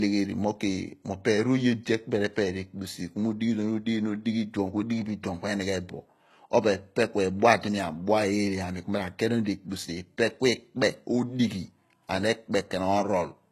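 Throughout the speech, s sounds turn gritty and lispy, with nothing above 12.3 kHz. The likely cause is HE-AAC compression, rebuilding treble from copied lower bands.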